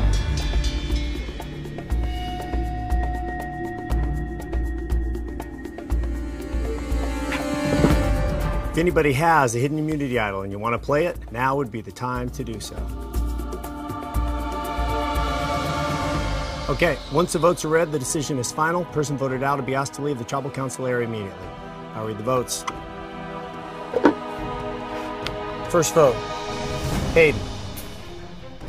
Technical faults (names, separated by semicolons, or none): periodic USB or driver dropouts